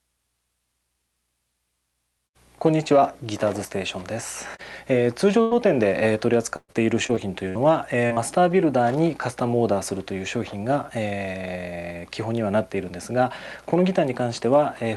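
At 5.41 s a burst of packet loss opens a hole of about 100 ms, running to 5.53 s. The receiver holds and extends the last sound it had, letting it fade, so the stretch turns into a steady buzz or dwindling hiss rather than silence. The audio then picks up further along with that tenth of a second gone. Unlike the later choppy stretch, this is a single smeared gap, not a series of stutters.

The final 20 ms of that gap, at 5.51 s, and a second 20 ms frame at 9.40 s, are lost packets rebuilt from error correction. The next packet carried a low-bitrate spare copy, and the decoder played it, so nothing drops out. Instead those frames sound briefly grainier and noisier. On this call path the band tops out around 12 kHz, which fits Opus at about 64 kbps. These are roughness blips, not gaps.

From 6.56 s to 8.92 s comes repeated packet loss with a robotic sound. Seven separate gaps, the longest 122 ms, are each patched by stretching the preceding sound, and about 13% of the span is filled that way. 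Roughly a fifth of a second of it was rebuilt from spare copies. Because the holes follow one after another, the sound turns choppy, stuttering with small pieces missing, quite unlike the lone fade at 5.41 s.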